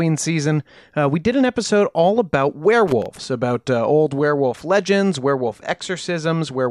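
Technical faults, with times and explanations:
2.88–3.25 s: loose connector crackle. For 0.37 s a worn or dirty contact keeps making and breaking, chopping the speech into an irregular, scratchy burst. The waveform shows jagged dropouts and sharp spikes, and the spectrogram shows scattered broadband vertical streaks.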